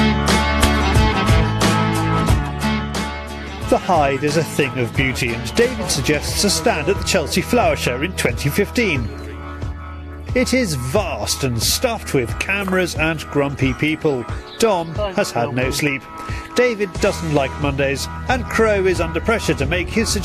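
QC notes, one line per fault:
Nothing to flag here; the audio runs without any problems I could pick out.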